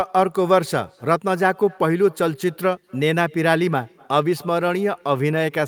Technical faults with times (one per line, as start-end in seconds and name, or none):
0.00-5.68 echo with no canceller